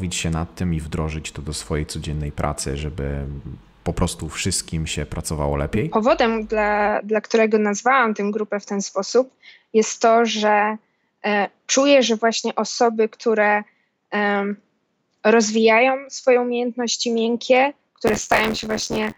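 Right at the tail, from 18.07 s to the end at 19.17 s, there's buffer tearing. The writer and the hardware reader of the ring buffer have drifted and cross mid-period, so roughly a third of each buffer replays audio from about 20 ms earlier, spliced in with hard edges. You hear it as a robotic rattle riding on the sound at 86.1 Hz, which fits a 512-sample buffer.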